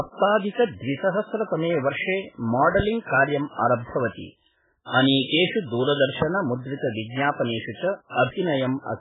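The whole clip carries heavy MP3 compression damage. Nothing gets through above 3.8 kHz, and the speech sounds watery and swirly with smeared consonants. That points to a very starved encoder, likely running at something like 8 kbps and dropping weak frequency lines frame to frame.

A loud pop hits from 2.80 to 2.82 s, just before "कार्यं आरब्धवती", and another from 6.22 to 6.24 s. Each is a single sharp click, roughly 15 dB above the speech, most likely a brief voltage spike from a switch, static or driver glitch, with the speech continuing underneath.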